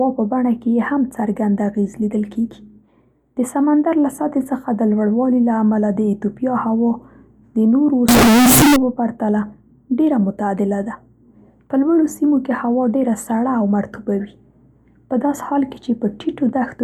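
From 8.09 to 8.76 s, just before "په پرتله", the speech abruptly turns into a harsh, very loud, nearly square-edged buzz sitting at an almost fixed, high level. This points to float read as integer, likely from 32-bit float samples being taken as 32-bit integers, so sign and exponent bits dictate level. Unlike ordinary clipping, the background noise jumps to the same loudness as the speech, yet pitch stays traceable.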